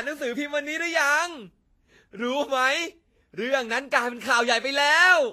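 From start to finish the speech carries plainly audible damage that's most likely Vorbis compression at a low bitrate, something on the order of 30 kbps. Nothing gets through above 14.2 kHz, so the top end is shut off. Below that, the treble has been quantised so coarsely that the fine detail turns into hiss of roughly the same energy. The result is a grainy, hissy sheen over the treble, roughened tone, and softened consonant attacks.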